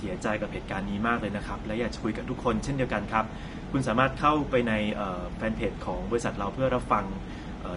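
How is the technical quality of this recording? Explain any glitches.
The recording has one audible problem, and it runs the whole length of the speech: codec damage that is plainly audible throughout, most likely from low-bitrate Vorbis compression. At such a low setting the encoder keeps a smooth outline of the spectrum but quantises the high-frequency detail so coarsely that it turns into noise-like fill. The result sounds hissy and grainy, with roughened tones and softened consonant attacks, which fits a rate around 32 kbps. On a spectrogram, energy stops abruptly at about 10.6 kHz, and the band beneath shows patchy, speckled blocks instead of continuous harmonic streaks.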